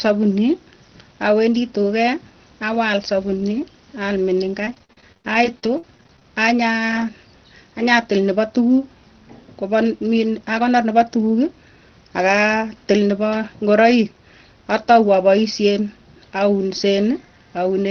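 From 4.65 to 6.25 s the speech breaks up with repeated packet loss (robotic sound): about nineteen short holes, the longest 72 ms, with roughly a quarter of that stretch filled in by stretching the preceding sound. The result is choppy, with pieces missing. On a waveform the envelope looks stuttered, with smeared, repeated segments. The spectrogram shows blurred, stepped harmonics under the 6 kHz ceiling set by the call codec.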